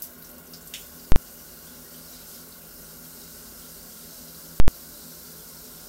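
At 1.12 s and again at 4.6 s, invalid numbers at full scale: a calculation produced infinite or invalid values that were pinned to one extreme value for 40 ms and 80 ms, giving loud bangs. The waveform shows flat plateaus at one extreme, far beyond the audio's peaks. The spectrogram shows broadband vertical stripes at each block's edges.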